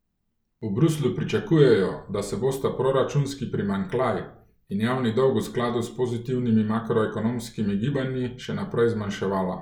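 The recording carries through its whole duration without any audible technical fault in the signal.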